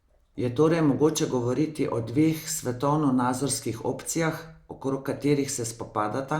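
No technical faults are audible.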